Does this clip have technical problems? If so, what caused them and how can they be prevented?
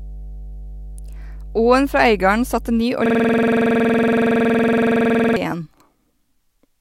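Yes. From 0 to 2.81 s a steady low 50 Hz drone sits under the speech, fairly loud, roughly 15 dB below it. This is mains hum, from a ground loop or nearby transformer leaking the power line into the signal. Keeping cables away from power supplies and using balanced, properly grounded connections prevents it.

From 3.06 to 5.36 s the audio turns into a hard, rattling stutter, one 46 ms fragment repeating exactly at 21.5 Hz. This is a system hang loop: the computer or driver froze while the audio hardware kept replaying one buffer, which fits a 2048-sample buffer. Reducing CPU load and keeping audio drivers stable and up to date prevents it.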